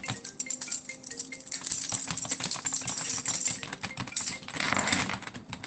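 No technical faults are audible anywhere in this recording.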